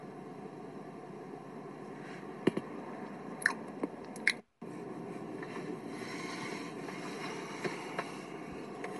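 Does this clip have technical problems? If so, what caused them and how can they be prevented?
Yes, there's plainly audible Bluetooth LC3 compression running through the whole clip. Nothing comes through above about 11.5 kHz, and the coarse, grainy top end likely comes from LC3's 10 ms frames at a bitrate that fits around 48 kbps. Using a higher LC3 bitrate or a wired capture path would prevent it.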